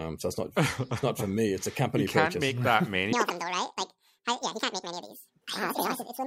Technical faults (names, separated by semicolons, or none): audio read two samples at a time (double speed)